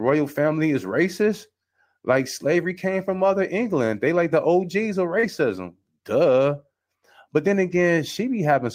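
At 5.19 to 5.25 s, a short concealed packet loss smears the speech: about 40 ms never arrived, and the decoder stretched the preceding sound across the hole rather than leaving silence. Its last 20 ms, from 5.23 s, is a lost packet rebuilt from error correction, where a rougher backup copy takes over before the real audio resumes.

From 7.67 to 7.77 s, more lost packets rebuilt from error correction leave about 60 ms of separate rough, noisy moments, which fits three packets. Unlike concealment, nothing is smeared, so the sound stays continuous but coarser.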